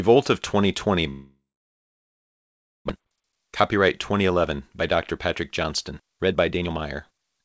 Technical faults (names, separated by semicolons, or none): long network dropout; jitter buffer speed-up